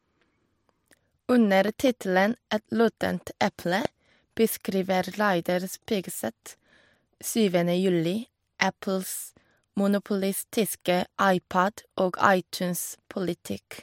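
A sharp double pop cuts through the speech between 1.68 and 1.90 s, peaking a little above the signal. A single, much louder loud pop follows at 3.85–3.87 s, well over the speech, which continues underneath both. These are likely voltage pulses from a plug, switch, static or driver glitch.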